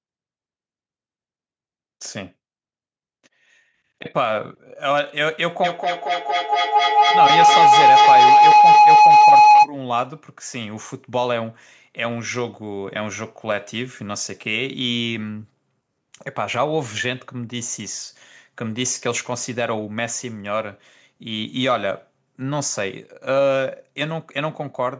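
From 5.64 s to 9.72 s a feedback howl builds up: a tone around 1 kHz swells until it is about 11 dB louder than the speech, pulsing roughly every fifth of a second. Two devices on the same call were sharing a room, so each trip from loudspeaker to microphone came back louder than the last. Unlike an ordinary echo, whose repeats fade away, these repeats grow and narrow to one pitch until the loop is broken.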